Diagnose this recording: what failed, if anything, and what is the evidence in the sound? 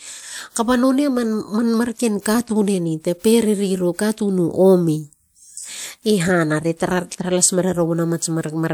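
Pre-echo at 2.21 to 2.26 s, a codec fault: a short hiss runs for about 44 ms ahead of a sharp attack in the speech. The transform block spreads quantisation noise sized for the loud onset across its quiet start, softening the attack.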